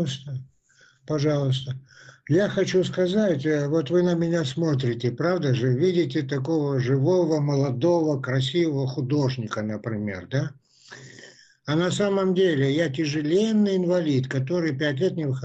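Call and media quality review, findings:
No audible faults found.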